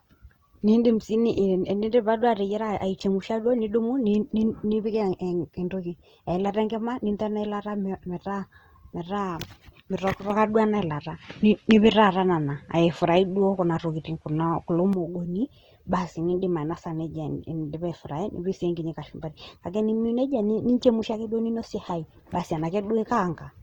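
Opus compression runs through the whole of this speech recording, most likely at a low rate around 24 kbps in its music mode. Band energies are kept but thinly coded, so the sound turns grainy and rough while the spectrum still reaches about 20.2 kHz. An input switched to a poorer device is the likely cause of the change from 10.3 to 14.93 s. With no gap at the switch, the top end drops to nothing above 11.6 kHz, the level shifts by roughly 5 dB, and faint new background noise sits far beneath the signal.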